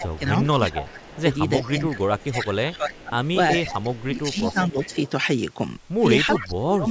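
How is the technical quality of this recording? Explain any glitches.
The recording has clear call-path trouble: the talker is repeatedly turned down, and a delayed echo of speech can be heard under the voice, within a call bandwidth that reaches up to 8 kHz.

Speech suppressed in double talk runs from 0.0 to 4.76 s and again from 6.4 to 6.87 s. The likely cause is an echo canceller that heard both sides active at once, could not tell this talker from its loudspeaker echo, and turned everything down. In the first stretch, around three seconds of speech dip by up to about 20 dB. In the later stretch, roughly 0.4 s drops by as much as about 30 dB, so the voice nearly cuts out.

Echo leak covers 0.16 to 5.11 s and then 6.35 to 6.54 s. A copy of the speech returns 375 ms late, most likely because a loudspeaker-side echo canceller let part of its microphone pickup through and sent it back. Through the long first span it sits about 20 dB below the speech as a faint trailing shadow. 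The short burst near the end is much stronger, only about 10 dB down, and comes back as a second copy of the voice.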